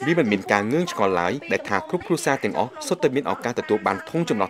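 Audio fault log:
2.01 to 2.03 s and 3.99 to 4.02 s, corrupt frame decoded. Each time, a couple of damaged compressed frames were played anyway. Misread data puts energy at wrong frequencies for about 26 ms, heard as a brief chirp, blip or burst, or a short hole.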